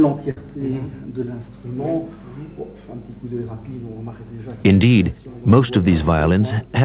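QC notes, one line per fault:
0.31–0.37 s, burst of packet loss: several consecutive packets failed to arrive in time, so the receiver concealed the gap for about 54 ms by extending and fading the preceding sound, heard as a brief held buzz or decaying hiss. About 50 ms of audio is skipped before playback resumes.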